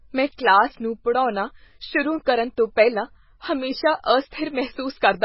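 From start to finish the speech has a hard treble ceiling with nothing above 5.6 kHz, plus a watery, swirly wash as weak frequency lines flicker on and off. That's likely heavy MP3 compression, which fits a very low bitrate around 16 kbps.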